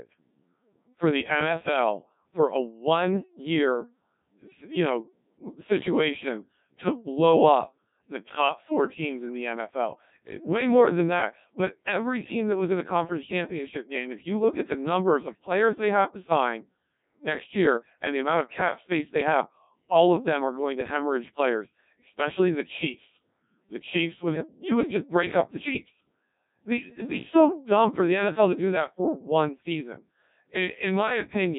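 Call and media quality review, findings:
Codec 2 vocoder damage across the whole clip: robotic, buzzy, heavily degraded speech, nothing above 3.8 kHz. Parametric coder resynthesising from pitch, voicing and envelope via sine waves, which fits about 1.3 kbit/s. Steady, unlike bursty packet-loss artefacts.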